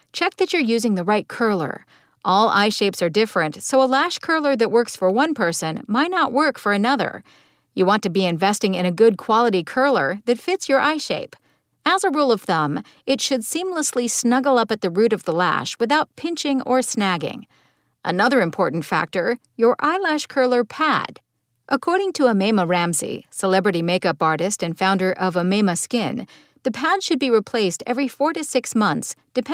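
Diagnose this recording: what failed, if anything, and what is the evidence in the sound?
Nothing failed: no stage in the chain from capture through to playback leaves any audible trace in this speech recording.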